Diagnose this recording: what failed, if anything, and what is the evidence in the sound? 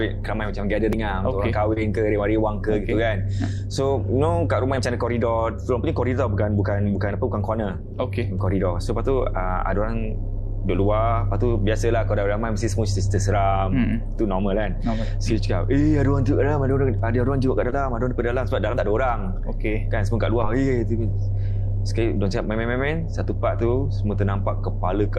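At 0.93 s there is an abrupt jump forward in the sound and no gap of silence. The likely stage is the driver or capture buffer: the program fell behind, the hardware overwrote samples it had not yet collected, and about 50 ms of audio vanished. The two sides of the missing stretch are butted together, which produces the discontinuity heard as the skip. This is a dropped buffer (overrun).

Three brief smears occur at 1.73 to 1.77 s, 17.70 to 17.73 s and 20.42 to 20.44 s, each a tiny wobble rather than a dropout. This is short concealed packet loss at the network stage. Packets arrived too late for the decoder, and the receiver filled the holes by extending the preceding sound before blending back into real audio, for about 28 ms, 18 ms and 9 ms respectively. The first event also coincides with a shift in delay of around 20 ms.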